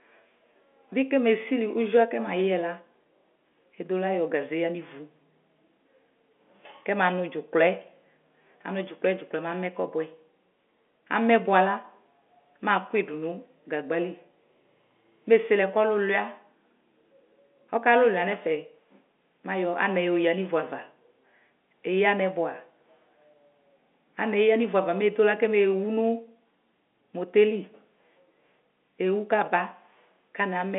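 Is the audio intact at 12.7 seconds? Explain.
Yes, the speech at 12.7 s is intact, with nothing disturbing it beyond the narrow telephone band of the G.711 coding, which stops short of about 3.7 kHz.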